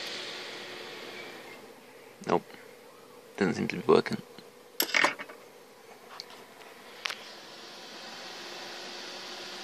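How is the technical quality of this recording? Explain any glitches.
No glitches to report: nothing audible breaks, drops out or distorts anywhere in the recording.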